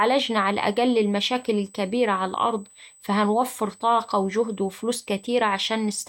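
USB whine throughout: a fixed 8 kHz tone about 30 dB below the speech, as 125-microsecond microframe current from the bus leaks through power or ground.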